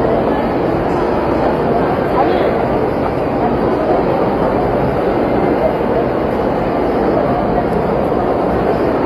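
Throughout, the treble sounds gritty and metallic, likely from HE-AAC compression at a low bitrate near 24 kbps. A spectrogram shows copied, smeared upper bands ending at 14.9 kHz.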